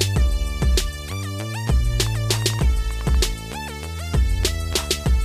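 From 2.00 to 3.25 s a train of clicks cuts in: around fifteen similar pulses at about 9.7 per second, unevenly spaced, peaking some 5 dB above the sound. Unlike random crackle, the clicks share one shape, likely interference or a struggling interface.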